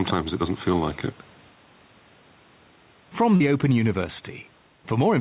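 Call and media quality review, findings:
Gain pumping, throughout. Input gain likely set far too high, with a fast limiter or compressor pulling level down on each loud sound. Level swings by around 5 dB; dynamics squashed.

Short concealed packet loss, 3.36 to 3.43 s. About 40 ms of audio missed the decoder deadline; receiver concealment extended the preceding sound, then blended back into real audio. Heard as a brief smear or wobble. Band stops at 4 kHz, consistent with G.711 mu-law.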